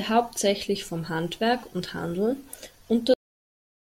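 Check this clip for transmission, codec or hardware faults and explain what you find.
One fault is present, a cut-off end. At 3.14 s the speech halts mid-sound, leaving 0.82 s of digital silence. The final buffers were never written, so there is no natural decay. The waveform falls instantly to a flat line and the spectrogram goes abruptly blank.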